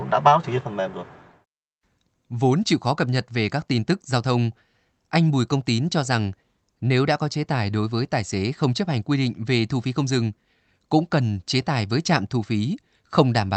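No technical faults can be heard in this speech, which comes across as expected for a call link.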